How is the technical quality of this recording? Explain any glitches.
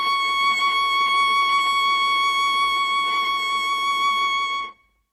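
No glitches or faults heard.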